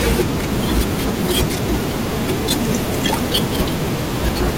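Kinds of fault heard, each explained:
Dropped buffer (overrun): the speech skips ahead at 0.66, 1.84 and 3.96 s, losing about 70, 70 and 20 ms, likely from samples overwritten before being read.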